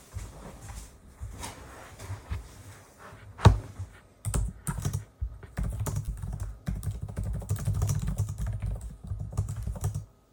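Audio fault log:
6.05–6.09 s: short concealed packet loss, about 20 ms missing and filled by extending the preceding sound, heard as a brief smear rather than a clean dropout's silent gap.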